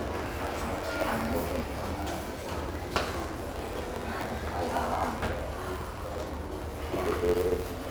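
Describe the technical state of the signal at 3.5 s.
At 3.5 s a block size mismatch (truncated) is present, as it is throughout: each block loses its tail, producing a 91.9 Hz buzz and 1.07x speed-up, consistent with 512-sample writes.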